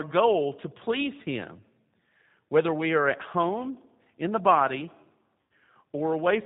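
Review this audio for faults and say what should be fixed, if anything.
The whole recording carries G.729 codec damage, plainly audible. The speech is squeezed into a 8 kbit/s stream rebuilt from a vocal tract filter, a pitch predictor and a few pulses per subframe, so it sounds rough and faintly synthetic. On a spectrogram, energy stops dead at 4 kHz across the entire clip, and harmonics look smeared and grainy rather than clean. To prevent it, carry the call on a wideband codec such as G.722 or Opus instead of G.729.

VoIP packet loss concealed by the speech codec occurs from 5.41 to 5.52 s, right after "home in the body". About 90 ms of audio went missing, which fits a run of roughly three lost packets. The decoder filled the hole by repeating its last pitch and filter with falling gain, so the sound stretches into a short buzzy tone or coloured noise that fades before the voice returns weak or distorted. 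On a waveform this shows as a small stretch with a decaying envelope. A spectrogram shows smeared, static energy there in place of normal speech movement. To prevent it, reduce network loss with QoS prioritisation and use an adequate jitter buffer or forward error correction.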